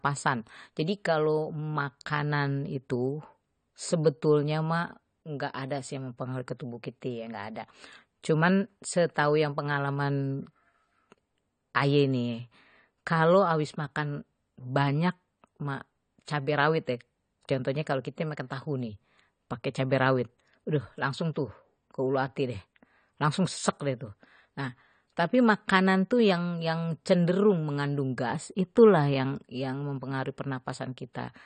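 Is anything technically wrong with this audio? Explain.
Yes. Throughout the clip the speech is dull, with nothing above 9 kHz and a smeared, warbling texture on sibilants. This is likely AAC compression, AAC-LC at a low rate; the damage fits around 32 kbps, where the codec lowers its cut-off and coarsely quantises the remaining bands.

At 16.25 s there is pre-echo: a brief hiss about 19 ms long leads into a sharp attack. The codec spreads quantisation noise across its whole transform block, so the noise sized for the loud onset also fills the quiet moment just before it, blurring the attack.

From 26.14 to 27.83 s there is sample clock jitter. The converter's timing wavers by a fraction of a microsecond, and the resulting error, around 55 dB below the signal, grows with waveform slope. It shows as a faint roughness riding on louder, brighter speech.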